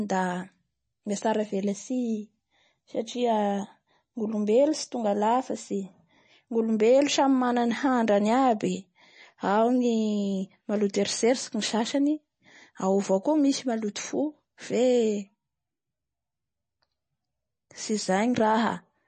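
Throughout the speech, nothing is present above 9 kHz, and codec artefacts are plainly audible. This is likely MP3 compression at a rate that fits about 32 kbps: short of bits, the encoder drops weak frequency components frame by frame and cuts the treble outright.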